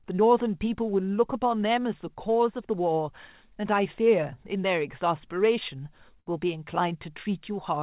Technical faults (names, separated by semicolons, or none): burst of packet loss